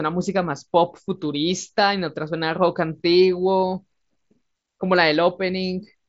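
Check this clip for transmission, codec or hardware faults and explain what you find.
No faults are audible in this recording.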